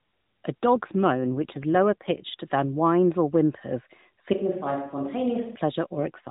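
Speech carried over an AMR narrowband mobile codec, so nothing above 4 kHz reaches the spectrogram and there is light codec roughness. The main fault is an AMR rate drop from 0.75 to 2.23 s, ending just before "than whines or whimpers", and again from 5.94 s to the end. The voice turns buzzier and more synthetic, which fits a step down from about 12.2 to 5.9 kbps as the network spends bits on error protection. On a spectrogram the 4 kHz ceiling and continuity stay intact, with no gap, but formants smear and harmonics blur. From 4.33 to 5.56 s, right after "than whines or whimpers", the sound abruptly turns roomy and hollow with thinner bass, likely from a switch to a distant microphone. The waveform envelope drops a few decibels and reverberant tails fill the pauses. The spectrogram shows weaker low frequencies and a faint room-noise floor far below the speech between syllables, with clean vertical edges at both changeovers.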